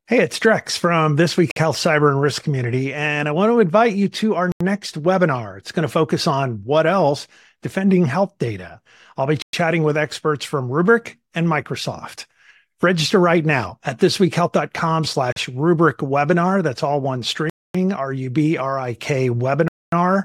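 The speech drops to dead silence six times, at 1.51 s (52 ms), 4.52 s after "invite you to our" (86 ms), 9.42 s (113 ms), 15.32 s before "rubric webinar" (39 ms), 17.50 s after "all one" (249 ms) and 19.68 s (242 ms). Each time it then resumes. These are likely Bluetooth stalls, where delayed packets left the headphone buffer empty. On a waveform each shows as a flat, near-silent gap, and on a spectrogram as a clean vertical blank band with hard edges.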